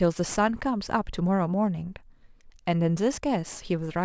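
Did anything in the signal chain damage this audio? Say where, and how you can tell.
Yes. There's aliasing at the resampling stage, running through the whole clip. Sibilants sound gritty and metallic, with energy jammed against 8 kHz, roughly 20 dB below the speech. That fits a drop from 24 kHz to 16 kHz without a low-pass first, so content above 8 kHz folded back as false tones.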